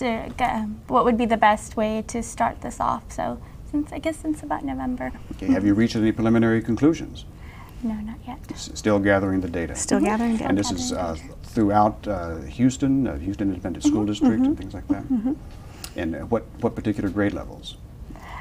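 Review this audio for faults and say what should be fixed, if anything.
Frames out of order at 5.09 to 5.20 s: two adjacent 46 ms blocks were decoded swapped, producing a garbled flutter. Reorder packets by sequence number in a jitter buffer before they reach the decoder.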